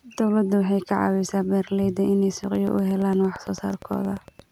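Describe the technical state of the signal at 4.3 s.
At 4.3 s the speech sits under a train of clicks. It starts at 2.44 s, just after "caawisaa beeralayda inay", and runs to 4.41 s. The clicks arrive at a regular 8.7 per second, about twenty in all, each with much the same shape. They peak at about the level of the speech itself. They sound like steady ticking laid over the audio. The likely source is repeated pulse injection, from nearby equipment or a faulty connection or power supply.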